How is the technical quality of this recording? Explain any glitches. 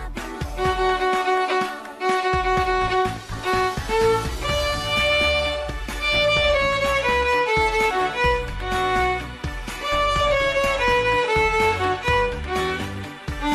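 The recording has two short glitches, both from compressed frames skipped. The first falls at 5.69 to 5.71 s, the second at 7.90 s. In each, a stretch of the compressed audio never reaches the output. The frames were missing or the decoder rejected them as damaged. The sound jumps forward by about 50 ms, which fits two frames of 23.2 ms.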